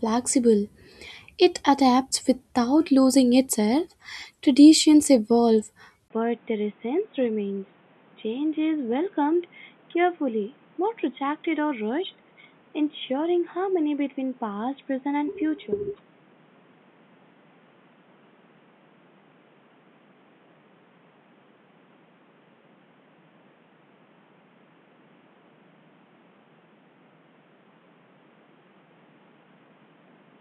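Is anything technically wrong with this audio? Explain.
Yes. Input switched to a poorer device at 6.08 s: the recording likely jumped to another microphone or a headset's call profile. After a 20 ms gap the speech turns dull and boxy, cut off above 3.8 kHz, roughly 10 dB quieter, with new background noise around 30 dB beneath it.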